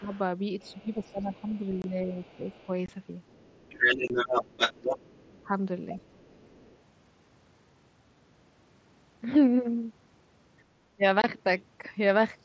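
Speech over a wideband mSBC headset link, with nothing above 8 kHz, has three faults. Speech suppressed in double talk pulls the talker down at 0 to 0.12 s, 0.73 to 2.69 s, 5.26 to 5.52 s and 10.97 to 11.03 s, by about 10 to 20 dB at the deepest. The dips follow the second talker's activity, not a fixed rhythm, which sets them apart from gating or packet loss; the echo canceller likely mistook the overlap for echo. The other side's voice leaking through is faint, about 35 dB down, from 0.13 to 2.66 s and 5.96 to 6.78 s, but roughly as loud as the talker from 3.3 to 5.25 s. It is a separate voice, not a delayed copy of the talker as with room reverb, which points to residual loudspeaker echo. Unconcealed Bluetooth headset packet loss leaves hard-edged holes of about 22 ms at 1.82 to 1.84 s, 2.86 to 2.89 s, 4.08 to 4.10 s and 11.22 to 11.24 s, each fitting three lost mSBC frames. Their abrupt edges and identical length distinguish them from the double-talk dips.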